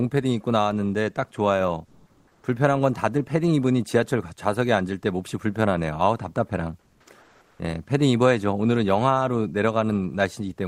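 From 1.86 to 2.43 s, 6.80 to 7.06 s and 7.21 to 7.59 s, the background turns into steady, featureless hiss, likely comfort noise in place of the background from Opus DTX.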